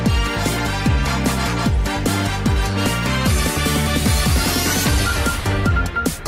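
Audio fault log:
No audible faults detected in the clip.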